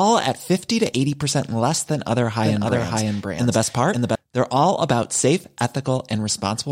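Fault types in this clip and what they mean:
Doubled audio track: the speech is likely being mixed in a second time, either captured again through a slower path or held as two out-of-step copies in an edit. From 2.43 s to 4.15 s a full-band copy trails the original by about half a second at roughly the same level. It has no decay or room colour, so it reads as a second overlapping take rather than an echo, and it starts and stops abruptly at those points.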